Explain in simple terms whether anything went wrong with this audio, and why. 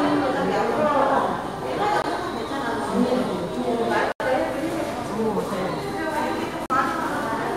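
Three blocks of digital silence interrupt the sound, at 2.02–2.04 s (20 ms), 4.12–4.20 s (80 ms) and 6.66–6.70 s (40 ms). In each, the sound cuts out and back with no fade. The 80 ms block sounds like a short hole.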